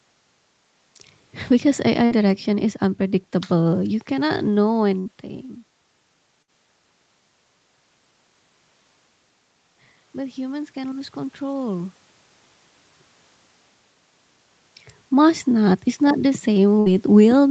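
At 2.05, 4.99 and 6.42 s, a burst of packet loss drops about 60 ms of audio each time. The receiver fills each gap by stretching the last sound and fading it, so voiced sound turns into a brief held buzz before the speech jumps ahead. On a spectrogram, the harmonics run flat and dim, then cut sharply to new content.

From 10.13 to 12.01 s, automatic gain rising lifts the level by about 4 dB. Speech and room noise swell together. The waveform envelope widens gradually, and the spectrogram's noise floor brightens across all frequencies.

At 16.80 s, right after "not is not the", another burst of packet loss leaves the same smeared, fading fill and then a skip.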